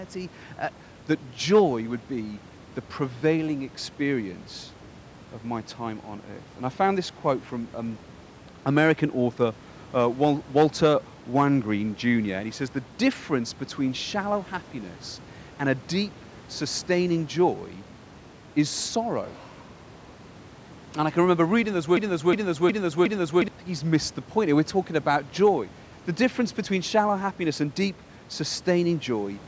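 From 21.97 to 23.48 s, just after "can remember reading those", a broken-record loop: a 0.36 s fragment repeats exactly four times back to back, likely from a stalled stream resending its last fragment. Unlike a stutter, each repeat is identical, and the lost audio never returns.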